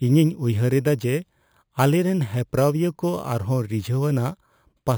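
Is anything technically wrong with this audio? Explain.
Yes. Throughout the speech, a bright, metallic fizz rides on top of the sound and rises and falls with its level. Its lowest band spans about 5.5 to 11 kHz, sits about 24 dB below the signal, and moves opposite to the pitch. This is imaging from sample-and-hold upsampling. Each sample was repeated to reach a higher rate with no smoothing filter, leaving mirrored spectrum copies. This fits an original rate near 11 kHz raised to 44.1 kHz.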